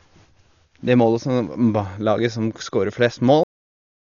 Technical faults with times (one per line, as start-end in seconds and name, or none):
0.00-4.00 Dolby Digital compression
3.43-4.00 cut-off end